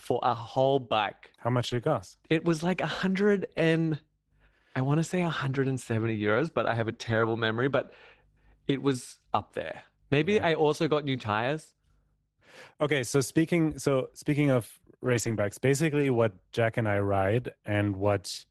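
Lost packets rebuilt from error correction at 1.67–1.81, 3.81–3.87, 7.09–7.19, 10.87, 15.05–15.39 and 15.93–16.03 s. Each is filled by a low-bitrate backup copy, so the speech turns rougher and noisier without dropouts.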